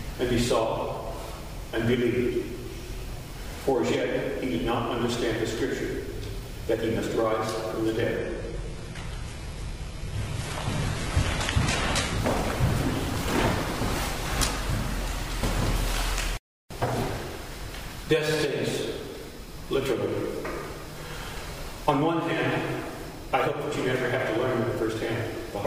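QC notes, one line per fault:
Throughout, block size mismatch (truncated): a steady buzz at about 46.9 Hz runs under the whole clip, which fits one stage writing 1024-sample blocks while the next reads fewer and discards the tail of each. Every discarded tail leaves a small discontinuity at the block boundary, and those repeating seams form the buzz. The speed of the audio stays at about its normal rate, so the damage shows up as the periodic buzz.
8.18–12.18 s, adaptive stream at a lower bitrate: for about 4 s the treble suddenly takes on a synthetic quality, with more codec artefacts. There is no gap at either edge. The sound points to the player falling back from a 96 kbit/s AAC-LC rendition to a 16 kbit/s HE-AAC one, where the upper band is rebuilt from the lower band, and then switching back at 12.18 s.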